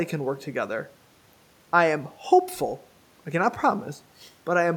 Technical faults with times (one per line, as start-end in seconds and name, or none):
none